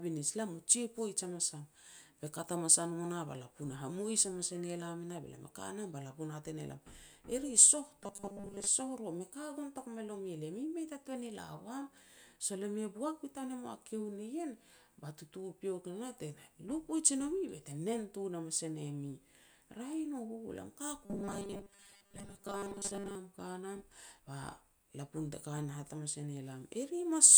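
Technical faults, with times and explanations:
8.03–8.67 s and 21.05–23.15 s: robotic sound from repeated short buffers. The speech becomes a rigid metallic buzz locked at 200 Hz, likely from the last 5 ms being replayed over most of the real audio. The buzz stays fixed rather than warbling like codec distortion.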